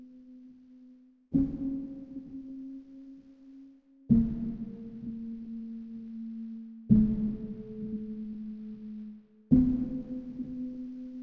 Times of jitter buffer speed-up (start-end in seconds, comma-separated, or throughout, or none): none